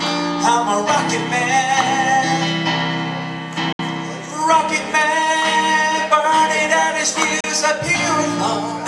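At 3.72 s the audio mutes abruptly in a digital broadcast dropout. A 3 ms fade leads into a gap of about 64 ms, and the sound resumes at 3.80 s. At 7.40 s a second, shorter hole of about 32 ms follows, ending at 7.44 s. The receiver stopped decoding when frames failed, and that material is gone rather than concealed. The gap lengths suggest whole lost frames of about 32 ms each, two and then one.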